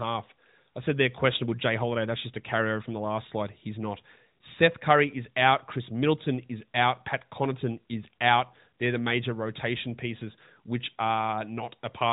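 At 10.94 s there is a brief dip or warble, a momentary softening before the speech picks up again, weak or rough for an instant. This is a lost AMR speech frame. The sound points to a single 20 ms frame failing its checksum after a radio error, so the decoder filled the gap by reusing the last good pitch and vocal tract settings at reduced gain. The surrounding narrowband AMR audio, capped at 4 kHz, shows only light codec damage.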